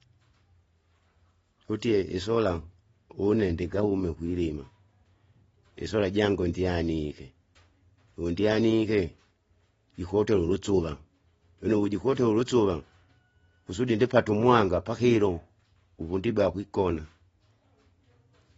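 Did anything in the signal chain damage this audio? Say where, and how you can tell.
Yes, at the codec stage, throughout the clip. The speech has nothing above 7.6 kHz and sounds dull, with warbling, fizzy smearing on sibilants. This is likely AAC compression: an AAC-LC encoder starved of bits, consistent with about 24 kbps, dropping its cut-off and quantising coarsely.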